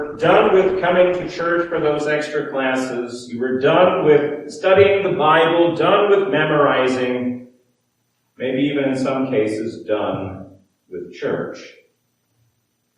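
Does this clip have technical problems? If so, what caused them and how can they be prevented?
Yes. From 0.0 to 2.0 s the adaptive stream starts at a low bitrate, fitting Opus at 16 kbit/s: treble is missing or synthetic and artefacts are stronger. Then it steps up gaplessly to about 64 kbit/s, and on a spectrogram the high-frequency ceiling jumps upward at 2.0 s. Starting on a higher-bitrate version, or measuring the connection before playback, prevents it.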